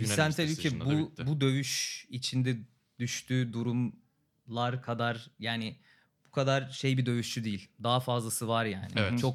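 Nothing stands out as a technical fault anywhere in this speech recording, so there's no moment to point to.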